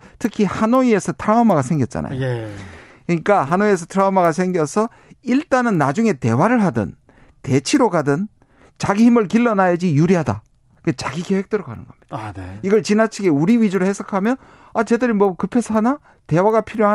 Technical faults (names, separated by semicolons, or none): resampler restarted on every block